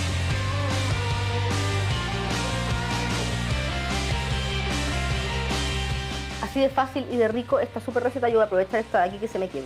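Nothing stood out as a fault anywhere in the clip on careful listening.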